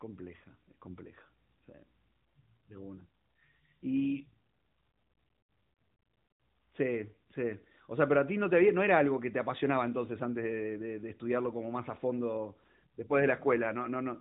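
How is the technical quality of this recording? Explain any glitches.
No glitches or faults can be heard anywhere in the recording. It has passed through an AMR narrowband mobile codec, so nothing above about 3.8 kHz comes through, with only light coding texture on the speech.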